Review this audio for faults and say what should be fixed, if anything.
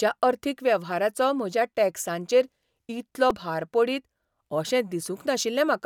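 A repeated buffer at 3.30 s, between "वेव्हाराचो म्हज्या टॅक्सांचेर इतलो" and "भार पडीत अशें": one 2.67 ms block, fitting a 128-sample buffer, plays three times, giving a brief buzz. The waveform shows identical repeating segments with hard joins, and the spectrogram shows thin vertical lines. Enlarging the playback buffer or raising the audio thread's priority would stop this kind of underrun.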